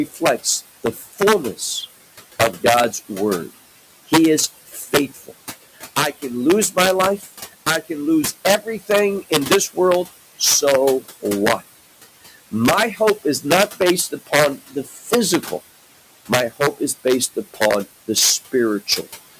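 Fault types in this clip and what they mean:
Integer overflow, throughout: the loudest speech peaks are pushed about 5 dB past the integer limit, and instead of being held there they wrap to the opposite sign, so a small fraction of samples jump across the full range as violent cracks sharper than clipping.
Noise suppressor artifacts, throughout: the suppressor lowers the steady room noise, which sits about 17 dB under the speech, by about 16 dB, band by band and frame by frame, so the background sinks in pauses and rises again under speech.
Speech cut by the noise suppressor, at 0.06–1.62, 4.67–5.31, 5.96–7.9, 8.64–9.77, 14.11–15.52 and 16.28–17.61 s: the suppressor mistook parts of the speech for noise and turned them down by about 13 to 16 dB, so soft sounds and endings come out swallowed, most in the first, second and fifth spans.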